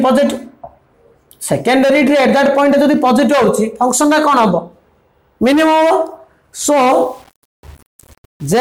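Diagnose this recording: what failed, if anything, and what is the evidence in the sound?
From 6.91 s to 8.60 s the sound turns gritty, distortion tracking its level: likely low bit depth without dither, 7-bit rounding during sample-format conversion.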